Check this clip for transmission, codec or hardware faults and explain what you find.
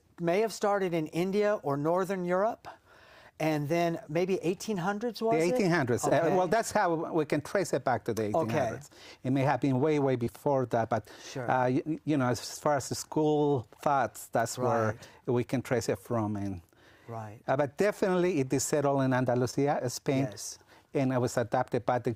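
Three brief dropouts were found, all short concealed packet loss, at 6.09–6.13 s, 10.25–10.28 s and 19.50–19.54 s. Each time about 20 ms of audio arrived too late, and the decoder extrapolated the preceding sound before crossfading back, producing a quick smear or wobble. A spectrogram shows smoothed, repeated harmonics or flat noise there; the waveform shows a slightly too-regular patch.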